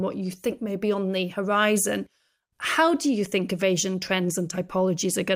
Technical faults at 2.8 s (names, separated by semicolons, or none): none